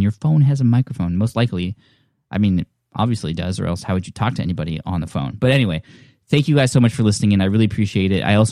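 A recording of speech, with nothing technically wrong to report at any point.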